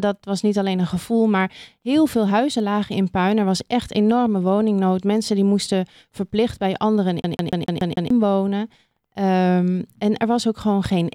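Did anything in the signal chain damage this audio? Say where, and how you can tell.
Yes. The playback stage is at fault: a CD stuck on one turn. From 7.22 to 8.10 s, the same 147 ms of speech repeats six times. Each repeat ends in a brief mute. A scratch keeps throwing the laser back one track, giving that even stutter.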